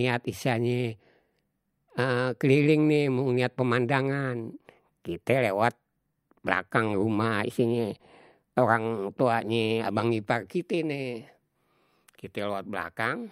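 Nothing stood out as a technical fault anywhere in the recording on listening.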